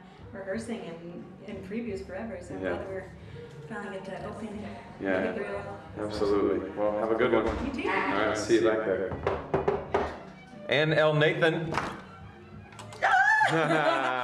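From 3.27 s to 9.27 s there's a doubled audio track: a full-band copy trailing by about a tenth of a second, a few dB under the original, with no decay or room colour. It cuts in and out abruptly, likely a slower second capture path.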